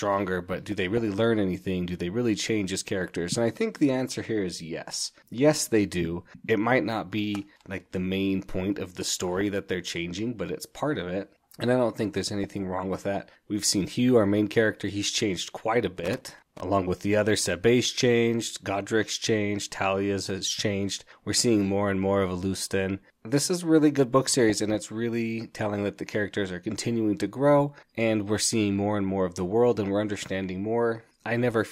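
DAB burbling occurs at 0.39–1.08 s, just before "learn anything"; at 9.06–9.41 s, between "main point of the" and "that they're changing but"; at 12.44–12.93 s; at 18.87 s; and at 24.50–24.75 s. Bit errors slipping past error correction corrupt sub-band data, producing bubbly blips confined to single frequency bands rather than broadband clicks.

Loose connector crackle at 15.97–16.61 s, between "he's changed quite a" and "with the other", comes from a contact rapidly making and breaking. It chops the signal into an irregular scratchy burst across the whole band, unlike the band-limited burbling.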